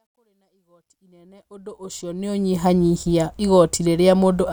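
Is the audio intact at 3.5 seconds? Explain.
Yes, the speech at 3.5 seconds is intact, with nothing cutting into or disturbing the sound at that moment.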